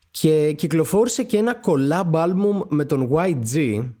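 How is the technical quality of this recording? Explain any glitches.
There's one glitch in the speech: from 1.11 to 1.13 s, a lost packet rebuilt from error correction. A low-bitrate copy carried in the next packet filled those 20 ms, so there's no gap, just a brief rougher, noisier patch, which fits a single lost packet.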